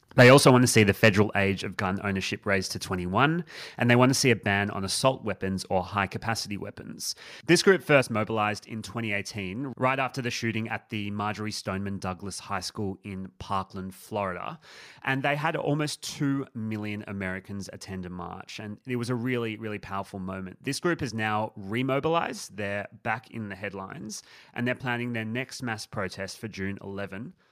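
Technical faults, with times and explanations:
0.2–0.5 s and 1.03–1.08 s, microphone overload: the input gain was likely set too high, so peaks overshot the converter's ceiling by about 6 dB and then about 4 dB. Their flattened tops give a harsh crackle just before "want to see the" and a briefer one later.
0.22 s, 1.23 s, 4.32 s and 8.01 s, microphone volume stepped down: the call software likely reacted to the hot input by cutting device gain in single steps of about 2, 5, 2 and 5 dB. Each causes an abrupt level drop, including one between "they want to see" and "ban on assault weapons" and another just before "mobilized in".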